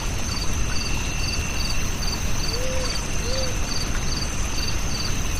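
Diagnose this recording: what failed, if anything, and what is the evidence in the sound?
Compressed frames skipped at 0.56 s, a codec-stage fault: the audio jumps forward by about two 26.1 ms frames, roughly 50 ms lost. Those frames were missing or rejected as damaged by the decoder, and the overlapping neighbouring frames smear the join into a brief blip rather than a click.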